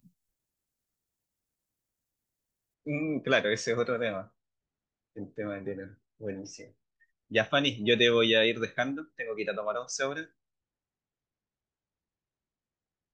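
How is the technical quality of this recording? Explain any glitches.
The recording has one clear fault, confined to the opening. From 0 to 2.74 s, pre-emphasis is left on. The speech carries a treble boost following the FM 75 µs curve, and the matching de-emphasis was never applied. At 10 kHz the level sits about 14 dB above 1 kHz, so the speech sounds thin and overly bright, with exaggerated sibilance.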